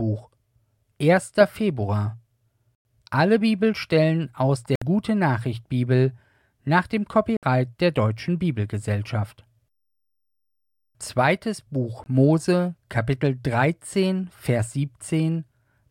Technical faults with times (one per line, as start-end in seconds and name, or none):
2.76 Bluetooth dropout
4.75-4.82 Bluetooth dropout
7.37-7.43 Bluetooth dropout
12.04-12.06 Bluetooth dropout